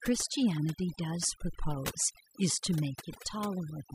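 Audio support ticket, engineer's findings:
Overdone noise removal, whole clip. Background drops and breaks up into twinkling specks. Component: noise reduction stage, set too strong. Bands near its noise estimate get cut hard, taking quiet speech detail with them.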